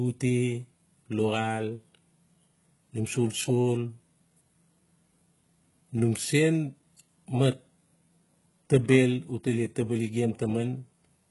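Sibilants sound gritty and lispy from start to finish in this speech recording, and the upper treble has a bright but synthetic, metallic sheen, with nothing at all above about 11.5 kHz. The damage is heavy and fits HE-AAC compression at a very low bitrate, likely around 12 kbps. Only the lower spectrum is properly coded, and the highs are rebuilt by copying lower bands upward under a coarse envelope, so harmonics no longer line up across the crossover.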